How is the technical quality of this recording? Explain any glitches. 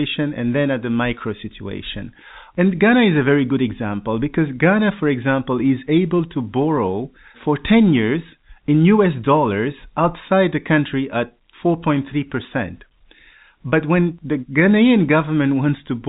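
No glitches can be heard in the recording. It carries the narrow sound of G.711 telephone coding, with nothing above about 3.8 kHz, which gives the speech its familiar phone-line character.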